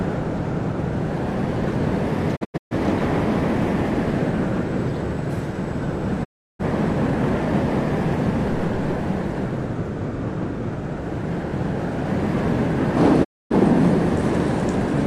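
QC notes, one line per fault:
2.35–2.75 s, digital broadcast dropout: the receiver lost frames and muted, leaving about 0.26 s of holes scattered over 0.34 s, the longest 0.13 s. Each edge fades over 20 ms, so the sound ducks out rather than clicking.
6.23–6.65 s, digital broadcast dropout: 0.34 s of sound muted, with 20 ms fades. Whatever was sent in that gap is gone.
13.23–13.56 s, digital broadcast dropout: a 0.26 s mute with the same 20 ms fades, which fits a few lost frames of about 43 ms each.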